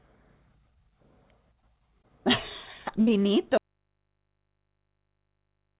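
At 2.02 s a short concealed packet loss interrupts the speech for about 30 ms. Roughly 20 ms of audio never arrived, and the receiver bridged the hole by extending the preceding sound for about 14 ms before blending back in. This leaves a brief smear or wobble.

From 3.01 to 3.11 s a burst of packet loss takes out about 60 ms of speech. The decoder sustains the last sound for about 53 ms, letting it fade as the gap continues, then resumes slightly later in the stream. The stretch in between is lost outright.

At 3.58 s the speech abruptly vanishes and does not return before the clip ends. This is an audio dropout to a faint residue. Only mains hum remains, far below the speech level, somewhere around 55 dB down. The likely cause is a lost input while the downstream path stayed live.

Throughout, the band stops at 4 kHz, which fits the call passing through G.711 mu-law at 64 kbps.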